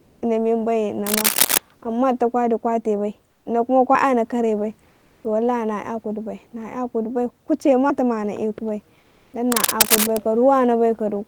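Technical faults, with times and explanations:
0.00–0.21 s, 3.31–3.45 s, 4.90–5.24 s and 8.99–9.33 s, comfort noise in place of the background: In these pauses, the real room noise, which sits about 40 dB under the speech, gives way to a smooth, featureless hiss. The second pause falls between "duta kwa dukwate bai" and "ino kuma", and the third follows "kare bai". The hiss is about 5, 8, 0 and 2 dB quieter than the room noise, respectively. The likely cause is a sender that stops transmitting when it detects no speech, which fits Opus discontinuous transmission, while the receiver fills each gap with synthetic noise that only roughly matches the background.
1.06–1.58 s and 9.52–10.20 s, cable scratch noise: Dense, irregular bursts of scratching and rustling sit over the sound for about half a second and then about 0.7 s, at roughly the same loudness as the speech. The likely cause is a worn cable, connector or control being moved. 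Its contact resistance jumps erratically as it shifts, which injects uneven noise directly into the signal path.
3.95 s and 7.90 s, audio missing between chunks: At each point there is an abrupt skip where the sound jumps forward with no silence. The first comes just after "dukwate bai ino kuma". The two skips are about 4 s apart, which points to a recorder or processor that likely works in 4 s blocks and drops around 50 ms while closing one block and opening the next. The two sides are then butted together, so the missing fragment simply vanishes.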